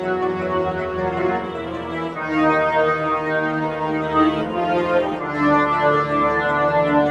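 A noise suppressor applied to music or sounds runs throughout the clip, from the first second to the last. A processor built to isolate speech is treating sustained tones, ambience and reverberant tails as background noise and turning them down, while sharper onsets mostly pass untouched. The result is a level that keeps shifting by about 5 dB as sustained material and decays are pulled under, giving the audio an uneven, pumping quality.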